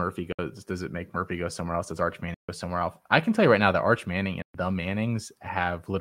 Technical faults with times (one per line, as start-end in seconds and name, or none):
0.32-0.39 Bluetooth dropout
2.34-2.49 Bluetooth dropout
4.42-4.54 Bluetooth dropout